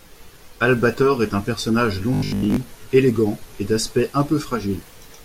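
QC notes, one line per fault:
0.96–4.74 s, digital radio blending to analogue: drops to FM over a 285 ms blend, faint hiss about 45 dB down, level unchanged.
2.14–2.56 s, robotic sound from repeated short buffers: rigid 50 Hz metallic buzz, likely from a 20 ms chunk being looped while most of the real sound gets skipped.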